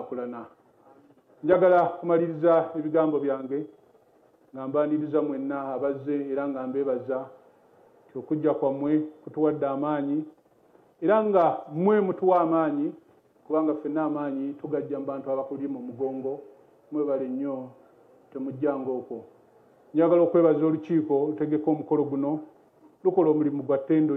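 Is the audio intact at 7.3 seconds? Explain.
Yes, the audio is intact at 7.3 seconds, with no dropout, click, distortion or other fault audible at that point.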